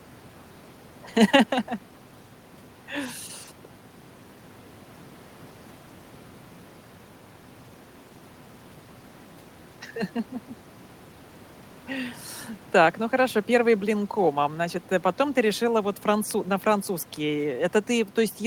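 No technical faults can be heard in this recording.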